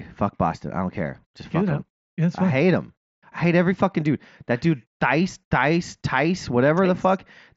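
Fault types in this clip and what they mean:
Nothing here counts as a fault; the speech comes through a Bluetooth headset link using the mSBC codec, which is working as it normally does.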